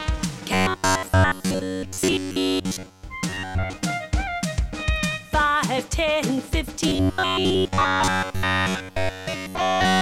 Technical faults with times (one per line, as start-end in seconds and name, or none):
0.54-3.03 robotic sound from repeated short buffers
3.29-3.73 robotic sound from repeated short buffers
6.88-10.01 robotic sound from repeated short buffers